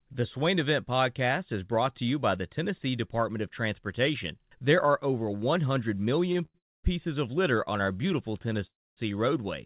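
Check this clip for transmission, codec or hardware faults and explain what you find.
Three jitter-buffer faults appear in the last few seconds, heard through a narrowband call path with nothing above 4 kHz, which fits G.711 mu-law.

Repeated stalls (stutter), 6.26 to 6.56 s: four gaps, the longest 89 ms, are filled by continuing the last sound because packets arrived late. The speech drags. The waveform shows repeated smeared blocks.

Call audio freeze, 6.58 to 6.86 s just before "of litter on our", and 8.67 to 8.99 s: likely delayed packets emptying the buffer. A brief buzz fades to near-silence, leaving blank spectrogram gaps of about 0.24 and 0.26 s.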